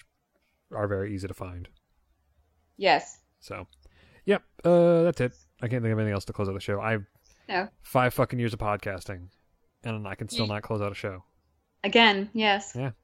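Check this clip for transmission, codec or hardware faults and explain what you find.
No faults can be heard anywhere in the clip. There is nothing here that calls for further explanation.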